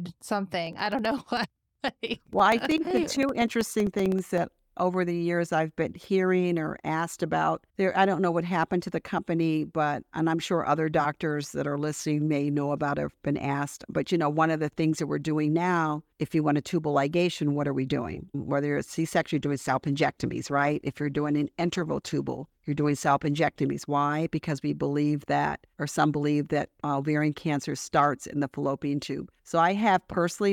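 From 0.67 to 4.38 s, periodic USB or driver dropouts blank roughly 2 ms of speech every 64 ms, giving a steady train of ticks.

From 19.34 to 24.25 s, a call bitrate drop cuts the encoder from 48 to 16 kbps for about 3.6 s, making the speech muffled and watery.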